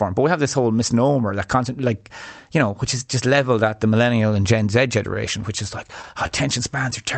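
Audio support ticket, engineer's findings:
Scattered short gaps, 5.14 to 6.33 s. About seven brief ticks and smears in the speech, none longer than roughly 40 ms, around 70 ms patched in total. Probable component: network path feeding the jitter buffer. Packets lost or late. Receiver concealment extends the last sound across each hole. Speech band tops out near 8 kHz, which fits an Opus call codec around 40 kbps.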